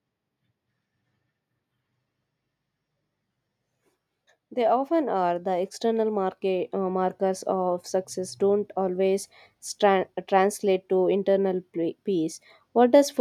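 Between 4.49 and 7.91 s, the automatic gain control judges the input too quiet and raises its gain, an automatic gain rise of about 8 dB. The voice and the background noise swell together over those three-odd seconds, so the room seems to creep closer.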